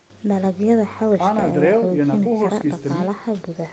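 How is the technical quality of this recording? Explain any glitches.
Nothing glitches in this speech recording; it simply has the typical sound of a call, with the microphone processing and the Opus codec in the call path keeping everything below about 8 kHz.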